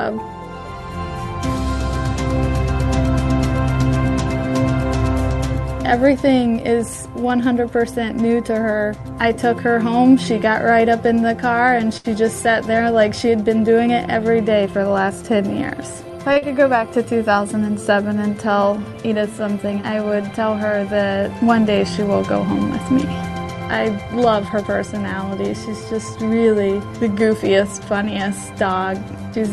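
From 11.97 to 12.06 s a sound hangs on for about 71 ms with a faint buzz or dip. This is a short stall from a late packet: the jitter buffer ran dry, and the receiver stretched the last sound until the packet turned up, so nothing was lost.

Between 14.65 and 15.24 s the audio hurries at unchanged pitch, running at 109 % speed. This jitter buffer speed-up comes from the receiver trimming small pitch-period slices, about 70 ms in total, to shed excess buffered delay.

At 16.33 s a second, briefer stall holds the sound for 28 ms. Straight after it, from 16.38 to 16.44 s, comes a brief smear. That is short concealed packet loss: 40 ms never arrived, and the receiver filled the gap by extending the preceding sound before blending back.

From 23.99 to 24.65 s a milder speed-up at 106 % removes roughly 40 ms.

Throughout, the Opus call path limits the top end to 12 kHz.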